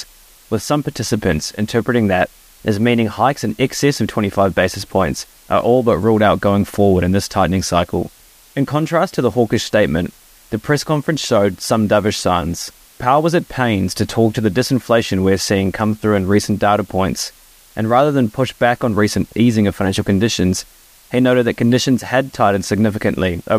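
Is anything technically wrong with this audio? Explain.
Yes. A low bit depth with dither affects the whole speech clip, from start to end. The signal appears to be stored with only about 8 bits. Before each sample was rounded to so few levels, dither noise was added. That turns the rounding error into steady white noise instead of distortion that follows the signal. The result is a constant, even hiss, roughly 30 dB below the speech. The hiss stays level under loud and quiet passages, with no grit or crunch.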